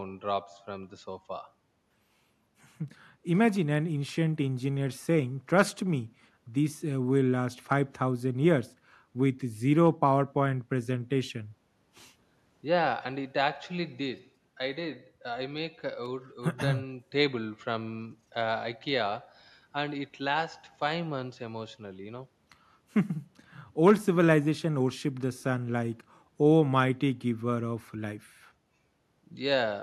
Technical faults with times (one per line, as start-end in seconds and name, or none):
none